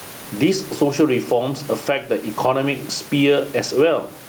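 Throughout the clip the background breathes: the room noise, which sits about 30 dB below the speech, swells up in each pause and then ducks away as soon as the speaker gets loud, with a swing of around 10 dB. Loud and quiet passages sound squashed toward the same level. This is gain pumping, likely from input gain set far too high with a fast limiter or compressor clamping down on every loud sound.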